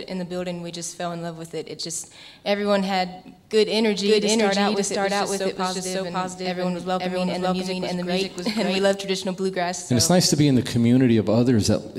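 A doubled audio track runs from 3.81 s to 8.95 s, most likely because the same signal reaches the mix twice, once directly and once through a slower capture path, so two copies sit out of step. The second copy trails by roughly half a second at about the same loudness, full-band and dry, with no decay or room colour. Everything is heard twice, and the copy cuts in and out abruptly at those times.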